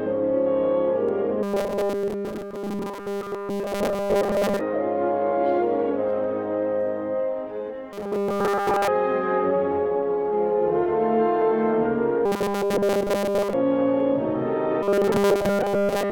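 A regular click runs through the sound about every 2.6 s from 1.09 s to 14.0 s, seven or so in all. These are clock drift buffer slips, likely from two devices on separate clocks disagreeing by something like 70 ppm, so a handful of samples gets dropped or repeated each time the buffer runs over or dry. Separately, there's a rigid metallic buzz at 200 Hz from 1.43 to 4.61 s, 7.93 to 8.88 s, 12.26 to 13.53 s and 14.83 to 16.12 s. That's robotic sound from repeated short buffers: a 5 ms chunk looping, which fits starved input. The middle two stretches are almost entirely looped, while the first and last still let some real audio through.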